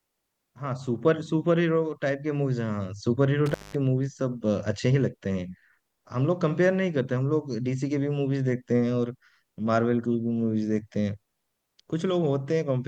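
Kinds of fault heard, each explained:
Intermittent contact: at 3.46 to 3.75 s the speech drops out for about 190 ms as a loose plug or cable connection briefly opens, with crackle marking where the circuit breaks and remakes, and faint hiss carrying through the gap.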